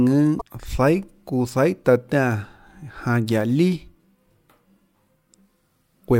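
A speech recording with one brief fault: damaged data in a compressed stream, between 0.37 and 0.42 s. Corrupted bytes in the encoded stream made the decoder misread those frames and lose sync, so for about 40 ms the speech is disrupted. On a spectrogram it shows as a narrow vertical band that breaks the surrounding harmonics; the waveform shows an abrupt discontinuity at the edges of that span.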